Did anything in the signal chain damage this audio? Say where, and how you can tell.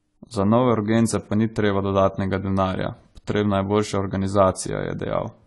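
Yes, at the codec: the whole speech clip sounds dull and smeared, with nothing above 11.5 kHz. That's likely AAC compression at a starved bitrate, around 32 kbps.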